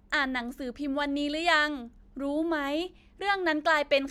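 No technical faults detected.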